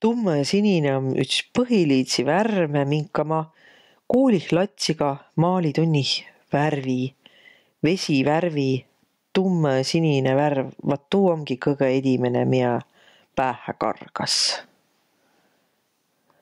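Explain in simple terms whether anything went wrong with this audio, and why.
Gain pumping runs through the whole recording, from start to finish. The microphone level was likely set far too high, so an automatic limiter keeps pulling the volume down whenever the speech gets loud, then lets it rise again in the pauses. The result is a large, breathing swing in level. Quiet and loud moments end up squeezed close together, making the speech sound flat and crushed.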